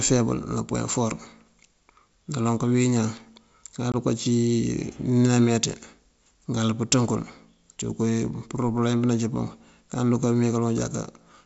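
At 3.92 s the speech drops into a hard-edged silent gap, about 20 ms long and ending by 3.95 s. This is packet loss on an ADPCM call, with about one packet's worth of audio missing over the G.722 wideband link. The decoder's adaptive predictor and step size lose step with the sender's, so the speech comes back slightly distorted before settling within some tens of milliseconds. That disturbed recovery is what sets it apart from a simple dropout.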